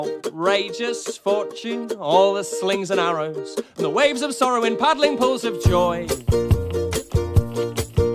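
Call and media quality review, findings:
No dropouts, distortion, level jumps or timing discontinuities detected across the signal path; audio chain performing as expected.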